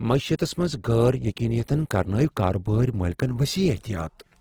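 Across the whole clip the speech sounds grainy and rough, with a noisy texture on held sounds even though the top end reaches about 20.2 kHz. This is likely Opus compression in its music mode, which fits a low bitrate near 16 kbps, filling bands with folded or noise content.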